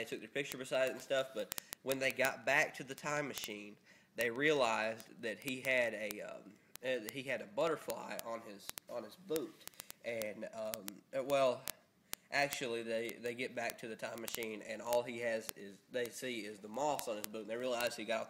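Word clock ticks run through the audio from 0.10 s to 18.29 s, a steady train of clicks repeating roughly every 20 ms, around a thousand in all. The receiving device is running on its own clock instead of locking to the sender's digital stream, with a mismatch of roughly 0.1 percent. Each time the two clocks slip past one another, a few samples are misread, and the resulting discontinuity fits a single sample being dropped or repeated, producing each tick.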